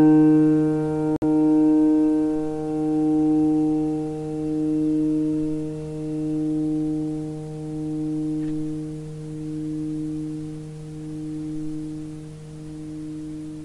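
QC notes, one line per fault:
1.16 to 1.23 s, Bluetooth stall: the wireless link likely hit interference that delayed packets long enough for the headphones' playback buffer to empty, so output halted until fresh data arrived. In the sound this is an abrupt drop to silence lasting about 58 ms early in the clip, with no fade in or out, followed by a hard restart of the audio once playback resumes.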